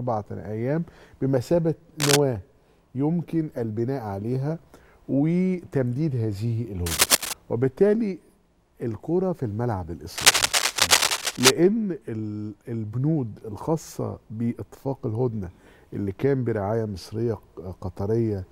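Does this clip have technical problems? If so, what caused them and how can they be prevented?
Yes. Cable scratch noise at 2.00–2.19 s, 6.86–7.33 s and 10.16–11.51 s: dense, uneven crackling bursts somewhat louder than the sound, likely from a worn cable or connector being moved. Prevent it by replacing worn cables and cleaning or securing connectors so they don't shift during recording.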